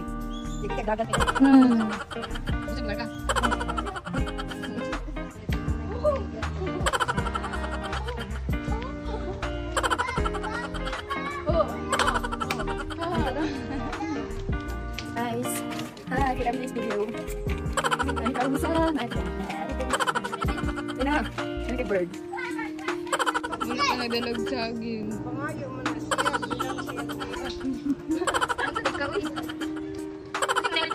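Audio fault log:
1.05, 16.53, 20.43, 25.03 and 30.22 s: dropped buffer (overrun). At each spot the sound jumps ahead without any gap of silence. At the first four, roughly 20 ms seems to be missing, and at 30.22 s it's closer to 10 ms. That fits the software likely not reading its input in time, so the hardware overwrote a chunk and the audio on either side got joined directly.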